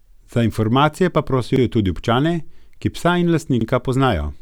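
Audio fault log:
1.56–1.61 s and 3.61–3.66 s, overlapping chunks: the speech is handled in 2.0 s blocks, and each new block begins 50 ms before the previous one finished, so that 50 ms slice of sound plays twice at each join. The doubled fragment lands 2.05 s apart, which is why it comes across as a brief stutter or tick at regular intervals rather than a random glitch.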